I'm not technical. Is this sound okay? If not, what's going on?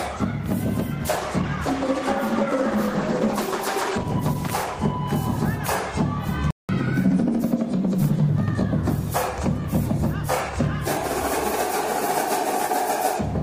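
No. Three faults can be heard.

From 1.01 to 5.57 s there is a call bitrate drop. The connection seems to have told the sender to squeeze the audio into far less data, so it loses its crispness and turns rough and muffled, worst for about three and a half seconds. It clears up again afterwards. Unlike a gap or a glitch, nothing stops or jumps. The sound simply keeps going at lower quality.

At 6.51 s there is a playback stall. The sound cuts out for about 0.18 s and then resumes. The likely cause is that the player briefly ran out of audio to play, or was held up by something else on the device. What sets this apart from a dropout in the connection is what follows: the player resumes by hurrying to make up the lost time.

That hurrying is the catch-up at higher speed, from 6.69 to 7.43 s. To win back the time lost in the gap, the player runs the audio a quarter faster for under a second, which also raises the pitch by around four semitones, like a slightly sped-up recording. 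Then it drops back to normal. A plain pitch fault would not come with faster timing or appear right after a silence.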